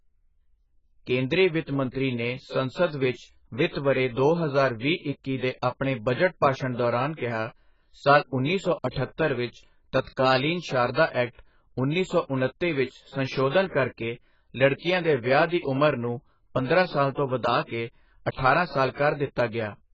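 AAC compression runs through the whole speech clip: nothing reaches above 7.6 kHz, and sibilants and held sounds carry a warbling, smeared texture. The likely cause is heavy AAC-LC coding, consistent with a very low bitrate near 12 kbps, which lowered the cut-off and starved the remaining bands.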